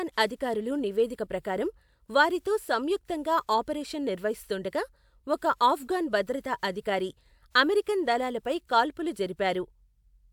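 No technical faults can be heard anywhere in the recording. The speech runs from beginning to end with nothing that stands out as a fault.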